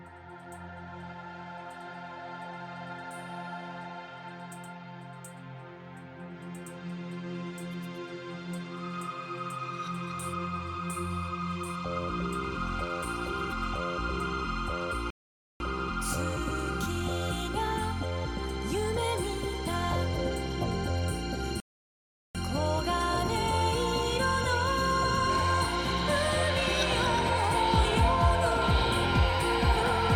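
At 15.10 s the audio drops to silence for half a second, resuming at 15.60 s. At 21.60 s it stops again for 0.75 s, until 22.35 s. Both are rebuffering stalls. The player ran dry and waited for data. Playback picks up exactly where it paused, losing nothing but adding time.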